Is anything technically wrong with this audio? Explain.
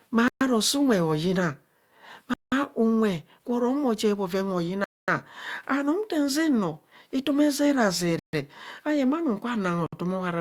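Yes. The speech has five short dropouts that sound like a Bluetooth stall: 0.28 to 0.41 s, 2.34 to 2.52 s just before "unwe gwo", 4.84 to 5.08 s, 8.19 to 8.33 s, and 9.86 to 9.93 s. Each cuts to silence for 61 to 238 ms, then resumes. The likely cause is interference delaying packets until the headphone buffer ran empty.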